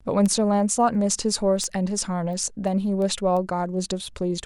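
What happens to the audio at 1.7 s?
At 1.7 s, word clock ticks are present. The receiving device is running on its own clock, not locked to the sender's digital link, with a mismatch of about 70 ppm. Each time the two clocks slip past each other, one sample is dropped or repeated and the samples around it are misread. In the speech, this sounds like a tick roughly every 0.3 s, about 15 in all, running from 0.26 s to 4.40 s.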